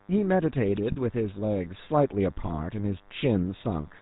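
Right from the start there's a thin, steady buzz sitting well below the speech, a DECT cordless phone buzz. A nearby handset or base is firing radio bursts 100 times a second, and something in the audio chain is rectifying them into a 100 Hz tone stacked with harmonics.

Over the whole clip the speech has that gravelly, buzzy edge of the GSM full-rate codec, and it's plainly audible. Nothing gets through above 4 kHz, and the coarse pulse excitation gives it the grit you'd expect from the 13 kbps full-rate coder.

At 0.92 to 0.97 s and again at 2.46 to 2.51 s there are lost GSM frames. The decoder fills each gap by repeating the last good frame, so the sound briefly hangs in a rough, metallic ring. The first gap sounds like about two frames' worth, the second like one.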